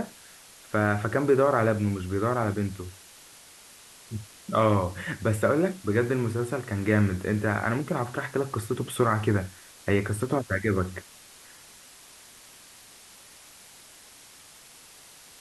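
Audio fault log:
Throughout, low bit depth with dither: the speech sits over a constant, even hiss, roughly 20 dB down from the talker, because the signal is held to about 7 bits and dithered before rounding, which turns the quantisation error into steady white noise instead of gritty distortion.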